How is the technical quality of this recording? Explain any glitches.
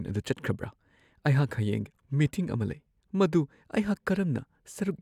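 The technical quality of this recording is good, and there are no glitches to explain.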